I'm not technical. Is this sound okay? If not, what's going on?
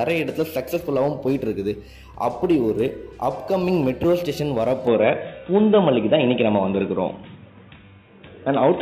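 No. From 4.87 s to the end, the sound turns dull and boxy, losing everything above 3.8 kHz, with a level shift: likely an input switched to a poorer device.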